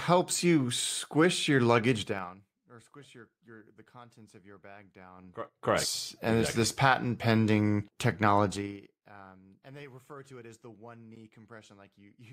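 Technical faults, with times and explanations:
2.00–2.46 s, zipper noise: Just after "you squish your", the level falls by roughly 25 dB in unsmoothed 3 dB steps, about twenty per second. Each jump leaves a small click. Together they make a fast ticking over the speech before "or squish your your".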